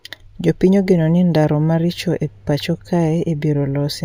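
Imaging from linear upsampling runs throughout this speech: straight-line interpolation, consistent with a 16 kHz to 48 kHz rate change, dulls the top and leaves a faint mirrored image around 35 dB down between 8 and 16 kHz, heard as metallic shimmer on sibilants.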